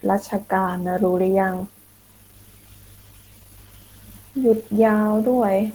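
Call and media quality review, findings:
Whole clip: speech muffled, hoarse and grainy, plainly audible; likely Opus compression in hybrid speech mode, consistent with roughly 16 kbps, yet content still reaches about 20.1 kHz.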